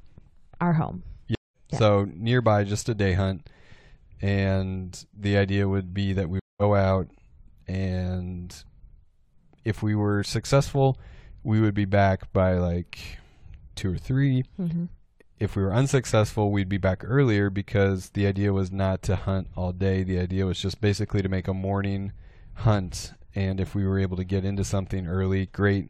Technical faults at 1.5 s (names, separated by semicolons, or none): stream reconnect